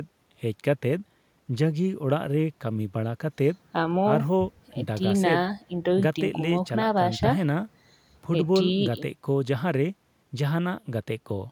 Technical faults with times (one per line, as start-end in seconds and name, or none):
none